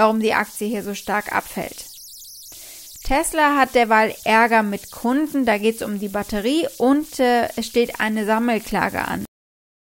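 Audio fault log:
throughout, converter idle tones: A whistle at around 5 kHz sounds in the pauses, with grainy noise under the speech, about 23 dB below the signal. An undithered delta-sigma converter falls into repeating bit patterns on small inputs, and those cycles produce tones whose pitch depends on the input's offset.
9.25 s, cut-off end: The speech stops abruptly mid-sound at 9.25 s and drops straight to digital silence for the rest of the clip, with no decay or room tail. The final buffers were never written or played out, so the waveform is simply truncated.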